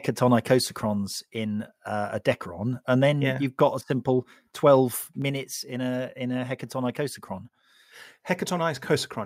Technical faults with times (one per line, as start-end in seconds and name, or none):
1.08 microphone volume stepped down
5.22 microphone volume stepped down